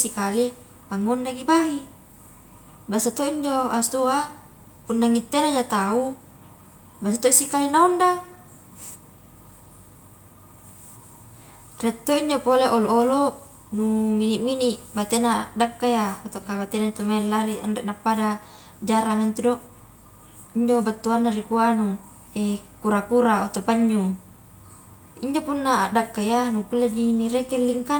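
No technical faults can be heard anywhere in the speech; the signal holds steady throughout without any audible defect.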